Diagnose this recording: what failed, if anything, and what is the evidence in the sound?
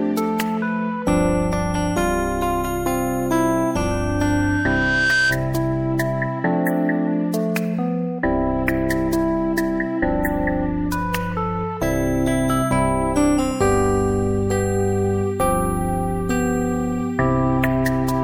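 A single tone near 1.6 kHz appears at 3.91 s and swells steadily for about a second and a half, ending at 5.42 s and peaking around 5 dB above the surrounding sound. This is loudspeaker feedback squeal, an acoustic and analogue-stage fault. The microphone picked up a loudspeaker it was feeding, and at 1.6 kHz the loop gain exceeded one, so that frequency reinforced itself on each pass.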